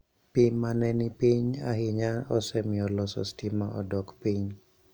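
No technical faults can be heard in this speech recording, and the signal remains continuous and intact throughout.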